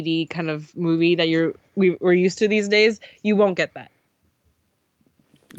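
Speech recording with no audible technical faults anywhere.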